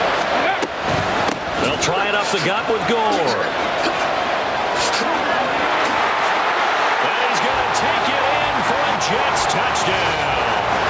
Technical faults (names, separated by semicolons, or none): gain pumping